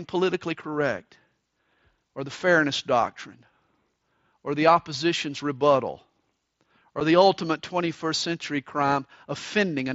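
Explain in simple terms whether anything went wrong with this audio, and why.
One thing went wrong: a brief case of unconcealed Bluetooth headset packet loss at 7.0 s. A single small chunk of sound, about 7.5 ms long, was lost between the headset and the phone, and nothing filled the gap smoothly. The sound simply drops out for that instant and snaps back, so you hear a tiny hole with sharp edges in the speech carried over the headset's mSBC link.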